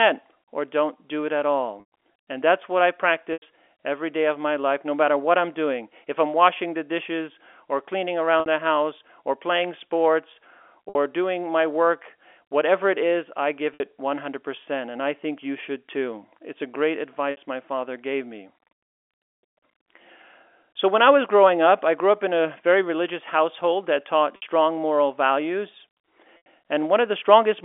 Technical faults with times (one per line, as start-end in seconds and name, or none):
1.80-1.84 packet loss with pitch repetition
3.33-3.42 packet loss with pitch repetition
8.40-8.46 packet loss with pitch repetition
10.89-10.95 packet loss with pitch repetition
13.74-13.80 packet loss with pitch repetition
17.31-17.37 packet loss with pitch repetition
24.36-24.42 packet loss with pitch repetition
26.37-26.46 packet loss with pitch repetition